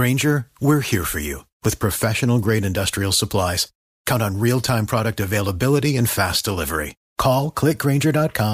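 No technical faults are audible.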